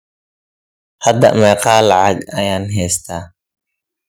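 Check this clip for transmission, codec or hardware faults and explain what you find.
Two hardware-side faults are audible in this speech: microphone overload on the loud passage, and two sudden downward steps in microphone volume.

Microphone overload runs from 1.06 to 2.08 s. The peaks of the speech push about 7 dB past the converter's ceiling, so their tops are flattened, with a few percent of the waveform squared off. The likely cause is an input volume set too high. It sounds like a harsh, crackling grit riding on the loudest syllables through that second.

Microphone volume stepped down twice, at 1.25 s by about 2 dB and at 2.25 s by about 5 dB. Each time the speech and the room behind it drop together in a single instant rather than fading. The likely cause is call software reacting to the overloaded input by cutting the device's gain in one move. The first step comes in the middle of the distorted stretch, and the larger second one follows just after it ends.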